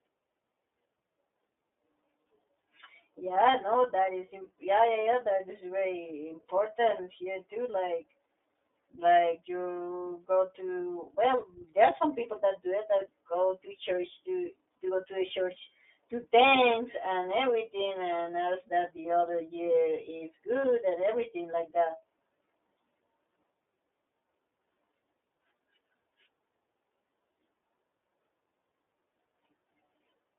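From start to finish the speech sounds thin, boxed-in and slightly rough and synthetic, confined to roughly 250 Hz to 3.6 kHz. This is iLBC codec damage: each 30 ms frame's excitation is coded independently at a low rate, consistent with iLBC's 13.33 kbps mode, discarding everything above 4 kHz.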